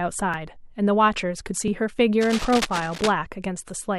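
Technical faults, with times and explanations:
0.34 s and 1.68 s: dropped buffer (overrun), the speech jumping forward, likely from unread samples being overwritten, losing roughly 10 ms and a few ms.
2.20 to 3.12 s: cable scratch noise, uneven scratchy rustling about 10 dB below the speech, likely a worn cable or connector shifting and changing contact resistance.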